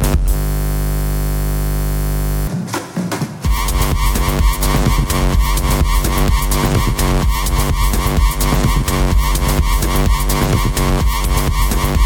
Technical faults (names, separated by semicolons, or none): system hang loop